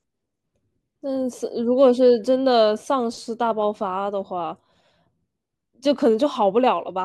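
No dropouts, clicks, distortion or other transmission faults are audible anywhere in this recording.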